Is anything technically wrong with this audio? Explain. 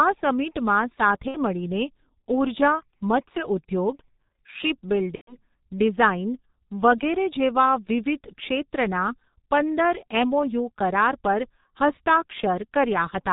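Yes. The whole clip carries heavy G.723.1 codec damage. Its sound points to a rate near 6.3 kbit/s. Nothing above 4 kHz survives, and the slowly updated 30 ms-frame voice model leaves the speech muffled and hoarse, with smeared consonants.

VoIP packet loss concealed by the speech codec occurs at 1.28–1.37 s and 5.15–5.38 s. The lengths fit roughly two and four lost frames. The decoder extrapolates its last pitch and filter at falling gain, so each gap becomes a fading buzzy tone or tinted noise. The speech stays weakened briefly after each gap.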